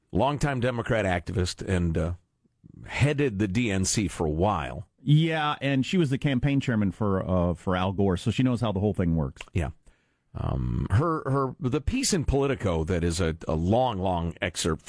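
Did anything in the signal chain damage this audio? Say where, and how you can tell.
No, nothing in the chain damaged it.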